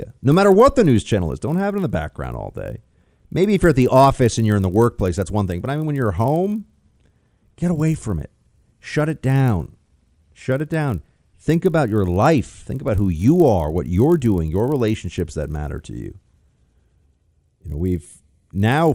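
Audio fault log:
Throughout, resampler restarted on every block: there's a steady buzz riding under the speech at 50 Hz, gone in the gaps between phrases. Each 20 ms chunk was upsampled in isolation, which fits a 24 kHz to 48 kHz conversion, so the filter never saw the real neighbouring samples at the chunk edges and left a small error at every seam. With blocks that short, the ticks fuse into a signal-dependent buzz.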